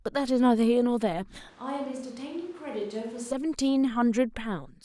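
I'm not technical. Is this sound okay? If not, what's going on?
No. From about 1.49 to 3.31 seconds there's what sounds like a switch to a distant microphone: the close microphone likely dropped out and a farther one took over. The speech suddenly turns hollow and roomy, much quieter, with thinner bass and more background noise, then snaps back.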